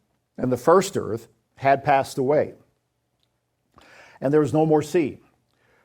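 No technical faults are audible.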